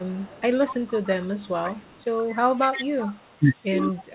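A faint second copy of the speech trails the main signal by 125 ms at 0.0–0.4 s, 0.57–2.13 s, 2.29–2.37 s, 2.56–3.36 s and 3.78–4.05 s. This is echo leak, likely from a far end on loudspeaker whose echo canceller let part of the microphone pickup through. The copy sits roughly 30 dB below the speech at the start, rises to about 20 dB down through the long middle stretch, and is strongest near the end at around 15 dB down. Everything in the clip stops at 4 kHz, which fits the narrowband G.711 call path it travelled over.

Between 3.86 and 3.93 s, while the echo is still present, the speech briefly dips by a few dB, about 5 dB at the deepest point, for roughly 50 ms in total. This is speech suppressed in double talk: the echo canceller likely could not tell the near talker apart from the returning echo and turned the level down, producing a short, shallow duck rather than a full dropout.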